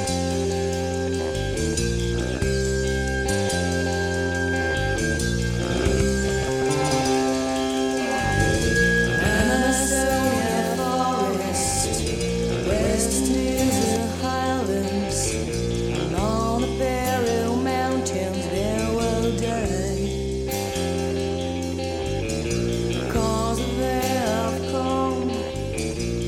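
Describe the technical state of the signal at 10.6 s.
At 10.6 s a doubled audio track is present, running from 5.7 to 13.96 s: a second, equally loud full-band copy trails by around 150 ms, likely from a slower capture path. Unlike an echo, it never decays or adds room colour.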